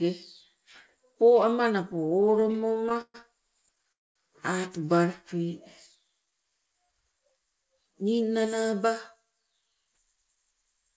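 Speech carried over a call link whose band stops at 8 kHz, which fits a G.722 codec at 64 kbps, with several jitter-buffer faults along the way. The first is repeated stalls (stutter) from 1.92 to 3.16 s. Packets arrived late or too slowly, so the buffer emptied 20 times. Each time the receiver stretched the last sound to cover the wait, adding 322 ms in total, about 26% of that span. The longest gap is 128 ms, long enough to fade. Nothing is lost, but the speech drags and judders. A second, lighter stutter from 3.66 to 3.92 s has five short stalls of at most 10 ms, adding 36 ms. It runs straight into a call audio freeze from 3.92 to 4.17 s. The last sound is held briefly and then goes silent for about 220 ms before the speech resumes where it stopped. This is likely a run of held-up packets that drained the buffer completely. The 233 ms gap is inserted rather than dropped, and it raises the playout delay by the same amount. 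From 5.97 to 6.97 s there is a jitter buffer slow-down. The receiver repeated single pitch periods and pause fragments to rebuild its reserve, adding 146 ms. The speech plays at 86% speed at unchanged pitch, so sounds are drawn out. From 8.73 to 10.96 s a jitter buffer speed-up does the reverse. The buffer held more than its target, so the receiver trimmed short pitch-period pieces, removing roughly 150 ms. The speech runs at about 107% speed at the same pitch and sounds hurried.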